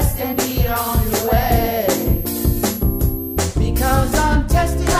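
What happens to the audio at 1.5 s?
A switching supply whistle runs from 0.0 to 3.38 s: a high tone drifting between 11.6 and 12.6 kHz, roughly 15 dB below the signal, from a switching power supply running in an audible burst mode or beating with another one.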